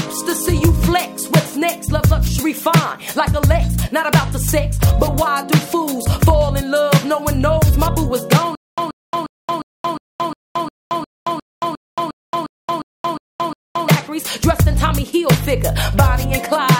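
From 8.55 s to 13.89 s there is stutter with silent gaps: a 131 ms burst repeats 15 times, separated by 225 ms of digital silence, a 356 ms cycle. A stalled player or stream likely replayed its last fragment at each retry, so the intervening audio is lost.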